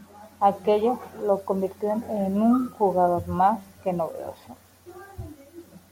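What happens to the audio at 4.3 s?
Nothing goes wrong at 4.3 s; the speech there plays through cleanly, with no dropout, click, distortion or other fault.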